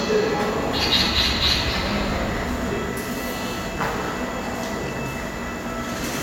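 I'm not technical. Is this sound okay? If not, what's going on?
Yes, it's fine; nothing wrong can be heard.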